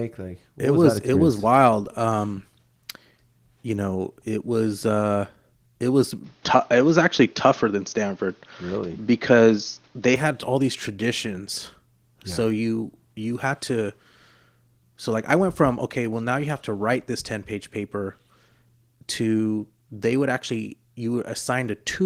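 From 6.24 s, right after "was uh it was", the recording most likely switched its input to a poorer device, until 10.16 s, when "had all these traditions" returns on the original path. The change comes with no gap. The replacement device passes nothing above 6.6 kHz, so the speech turns dull and boxy, shifts in level by a few decibels, and brings its own faint background noise well below the speech. The light Opus voice coding carries on through both sections.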